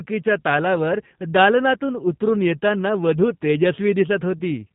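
Speech passed through a G.729 codec for its whole length. The sound fits the 8 kbit/s G.729A variant, which does not keep the waveform. It sends a vocal tract filter, a pitch predictor and a sparse set of pulses per 10 ms frame, and the decoder rebuilds speech from those. The damage is plainly audible: the voice sounds rough and slightly synthetic, and nothing above about 3.8 kHz survives, leaving it narrow and muffled.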